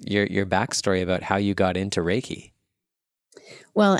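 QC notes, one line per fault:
No faults heard in the speech; nothing to log.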